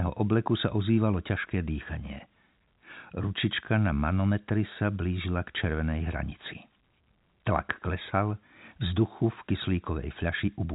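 Nothing stood out on listening to this speech, which carries the expected G.711 telephone band with no content above about 3.8 kHz.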